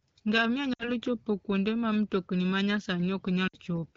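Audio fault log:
0.73–0.91 s: lost AMR speech frames. The decoder lost about 60 ms of speech, which fits three consecutive 20 ms frames failing their checksum. It repeats the last good pitch and vocal tract settings with falling gain, so the sound stretches briefly and fades quickly, as expected for the wideband mode. The speech returns weak or rough for a moment before the decoder settles.
3.47–3.58 s: lost AMR speech frames. This is the same concealment over about 60 ms, again consistent with three frames, giving a smeared, fading stretch before the speech recovers.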